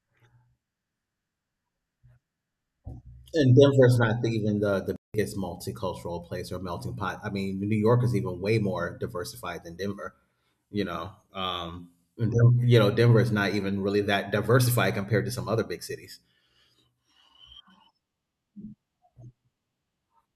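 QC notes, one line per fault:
4.96–5.14 s, playback stall. The speech cuts out mid-flow and the output falls silent for about 0.18 s. The sound then carries on. This most likely happened because the player ran short of buffered data or its audio thread was briefly blocked, so nothing reached the output until it recovered and resumed.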